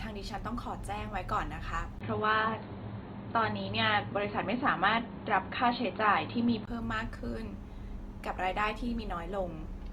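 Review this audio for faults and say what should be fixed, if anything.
The whole speech clip has a grainy, rough texture from Opus compression. The band still reaches about 20.2 kHz, but the codec is likely running its music mode short of bits, which fits roughly 24 kbps. Raising the bitrate would fix it.

At 1.99 s there's a 20 ms gap, then the sound goes dull and boxy until 6.67 s. Nothing comes through above 4.3 kHz, the level shifts a bit, and a faint new noise floor sits well under the speech. That's likely an input switched to a poorer device. Locking the input device during recording would prevent it.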